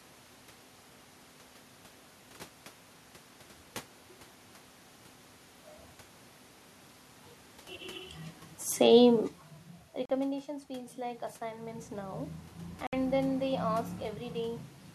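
A speech recording whose level sags from 8.8 to 10.57 s, the voice and the room noise beneath it sinking together by about 9 dB. That is automatic gain falling: the gain control judged the input too loud or its background noise too strong and eased its gain down over nearly two seconds, rather than the level dropping abruptly. At 10.05 s the sound cuts out for about 41 ms and resumes as if it had kept running, and a second hole of about 61 ms at 12.87 s comes just before "then they". Both are likely Bluetooth dropouts, the lengths fitting two and three lost packets that never reached the headphones. From 10.67 to 13.12 s voice and background swell together by about 6 dB. That is automatic gain rising: the input fell by about 13 dB, partly as the talker moved back around 9.5 s, and the control slowly raised its gain to compensate.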